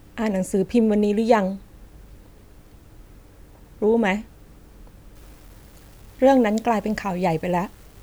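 Speech in which, from 5.16 s to the end, the signal was likely reduced to low bit depth without dither, rounded to very few levels, which fits 8-bit rounding. The error tracks the speech as gritty, grainy distortion roughly 35 dB below it, coarsest in quieter passages.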